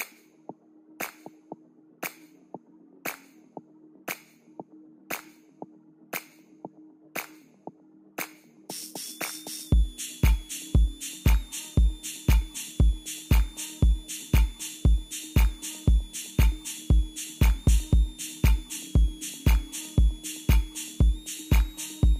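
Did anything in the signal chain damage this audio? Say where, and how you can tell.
Yes: a switching supply whistle starts at 9.02 s and runs to the end of the clip, entering at the analogue wiring and power stage. A thin high tone, wandering between about 3.2 and 3.8 kHz, sits roughly 30 dB under the programme, and its pitch shifts rather than holding steady. That drift gives it away: a switching power supply in audible burst mode, or beating against another supply, leaks its changing switching frequency into the audio path.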